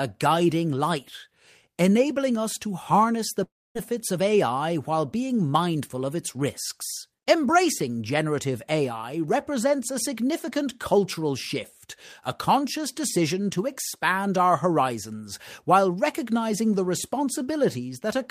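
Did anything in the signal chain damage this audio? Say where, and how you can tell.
Yes. At 3.43 s, right after "us to harness the", the speech gives way to a fading buzz that decays into near-silence until 3.77 s. About 320 ms never arrives, and speech resumes without it. This is likely a long network dropout, with the receiver's concealment stretching the last sound before giving up.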